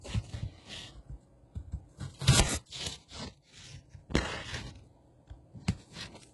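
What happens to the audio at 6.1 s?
At 6.1 s, as throughout the clip, the sound has a gritty, metallic treble cut off above 11.5 kHz, likely from heavy HE-AAC compression at around 12 kbps, with copied rather than original highs.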